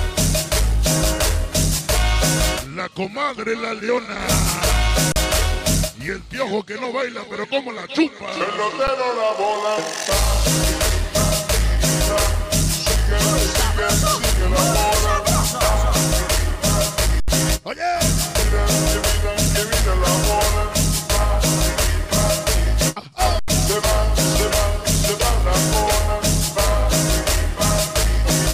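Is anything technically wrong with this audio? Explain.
Yes, there are four underruns with held sample: at 5.12 s (40 ms), 8.87 s (9 ms), 17.2 s (80 ms) and 23.39 s (88 ms). The output buffer ran dry, so the converter held its last value. The sound freezes flat and resumes, skipping roughly as much audio as the gap.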